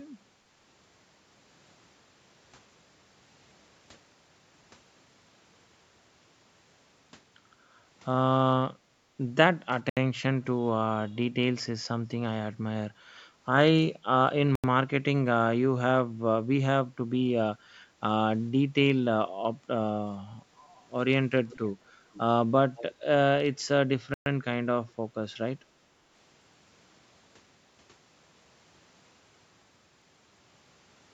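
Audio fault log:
8.77–9.12 s and 17.88–18.01 s, background gated by the echo canceller: the canceller clamped the microphone while the far end played, so room sound dips about 7 and about 9 dB before returning.
9.90–9.97 s, 14.55–14.64 s and 24.14–24.26 s, Bluetooth stall: the headphone buffer likely ran dry waiting for resent packets, cutting playback to silence for 73, 84 and 121 ms.
21.50–21.71 s, 22.13–22.20 s and 22.77–22.95 s, echo leak: a loudspeaker's sound likely slipped past the canceller, returning scraps of speech 479 ms late, about 25 dB down, the last about 20 dB down.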